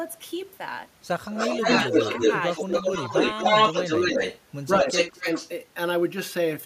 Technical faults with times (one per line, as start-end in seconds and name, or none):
1.26-4.41 echo leak
1.47-1.67 speech suppressed in double talk
2.63-2.73 speech suppressed in double talk
3.08-3.13 speech suppressed in double talk
4.76-4.87 speech suppressed in double talk
4.78-5.50 echo leak
5.21-5.26 speech suppressed in double talk